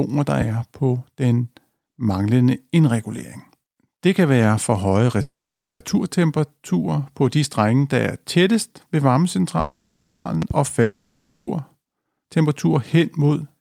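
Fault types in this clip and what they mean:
loud pop: A sudden voltage step or pulse, likely from a plug, switch, static or driver glitch, was added to the signal. It is heard as a sharp pop around 10 dB above the sound at 0.41 s, just before "på den manglende indregulering", and as a double pop at 10.42 to 10.53 s.
call audio freeze: Packets were likely held up in transit until the jitter buffer ran empty, so the receiver stretched the last sound into a fading buzz or hiss. At 5.21 s, after "kan være for høje", this lasts 0.59 s, mostly silent. At 9.60 s it lasts 0.65 s. Each time the audio resumes where it stopped, with nothing lost.
long network dropout: Audio likely stopped arriving for a stretch, and that part was never played. At 10.82 s the receiver fills 0.65 s with a continuation of the last sound that never reaches silence. The audio then picks up further on, with that 0.65 s missing.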